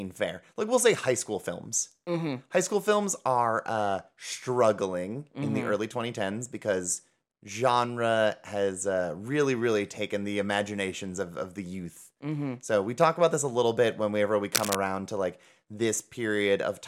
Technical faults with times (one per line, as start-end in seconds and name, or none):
14.54-14.77 cable scratch noise